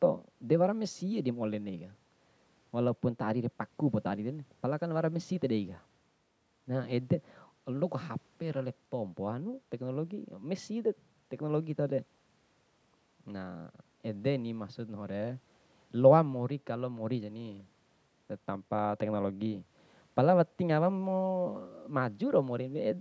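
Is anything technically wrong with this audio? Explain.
No, nothing stood out on listening to this speech, which carries the sound of call microphone processing, with the lowest bass trimmed and nothing above 8 kHz.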